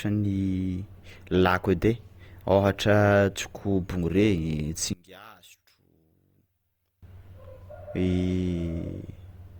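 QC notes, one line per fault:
4.93–7.03 s, one channel inverted: the speech abruptly drops by about 27 dB and turns faint, then returns at full level at 7.03 s. The likely cause is a polarity flip on one stereo channel. When the two sides are summed to mono, the centred voice cancels almost completely, along with its low end, leaving only the small difference between the channels as a faint residue.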